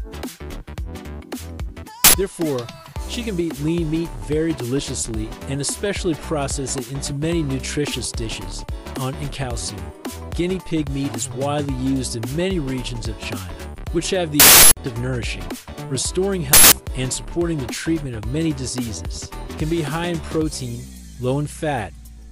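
At 2.04 s a harsh burst of digital noise cuts in for about 93 ms. It is an uninitialised buffer. Leftover memory was played as sound before real audio was written into that block. The length fits a 4096-sample buffer. The same fault returns at 14.40 s, lasting about 372 ms, which fits a 16384-sample buffer. It comes back at 16.53 s for about 186 ms, fitting an 8192-sample buffer. Each burst is abrupt and loud.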